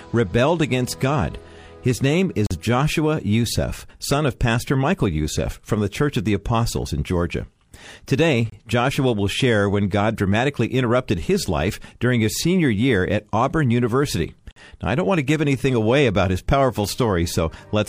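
Gaps between stream segments: the timestamps of consecutive 6-second segments fail to line up, and the player fills each shortfall with silence. The audio cuts out abruptly three times, at 2.47 to 2.51 s (about 42 ms), 8.50 to 8.52 s (about 26 ms) and 14.51 to 14.56 s (about 49 ms), each a hard-edged hole spaced roughly 6 s apart, matching the segment length. Nothing is lost from the sound itself; silence is inserted, stretching the timeline slightly at each boundary.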